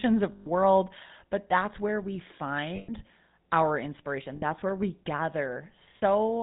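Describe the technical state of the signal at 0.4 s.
At 0.4 s the speech sits inside a burst of lost GSM frames running from 0.32 to 0.47 s. The decoder has no fresh data there, so it keeps replaying the last good frame's settings. The result is a rough, metallic ring.

Underneath, the GSM full-rate codec is plainly audible, at a rate consistent with 13 kbps. It rebuilds the voice from a vocal-tract model driven by sparse, regularly spaced pulses and passes nothing above 4 kHz. That gives the speech a dull, buzzy, gravelly texture.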